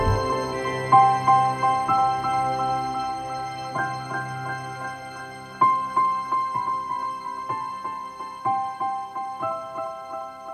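From 0 to 4.8 s the resampler restarted on every block: each 100 ms block was converted from 48 kHz to 44.1 kHz alone, leaving edge errors. The result is a 10 Hz ticking under the sound, visible as thin vertical spectrogram lines every 100 ms.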